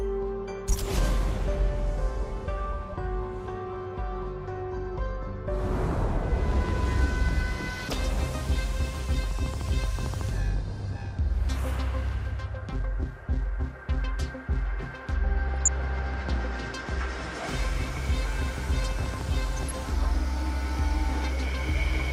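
At 7.90 to 7.94 s, 15.48 to 15.68 s and 19.57 to 19.75 s the audio breaks into DAB burbling: short blips of noise in single sub-bands laid over the programme. Weak reception let a fraction of a percent of bits slip past error correction, corrupting MP2 samples and scale factors so that individual sub-bands leap in level frame by frame. Unlike dropouts from lost packets, nothing goes silent. Instead, narrow bands flare up and garble the sound.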